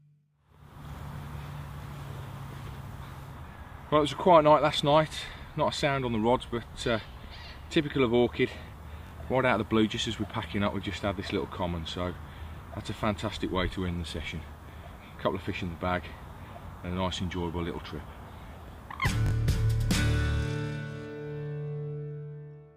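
Repeated buffer stutters occur at 9.07–9.11 s and 19.26–19.31 s. A 21 ms slice plays twice extra each time, which fits a late 1024-sample buffer.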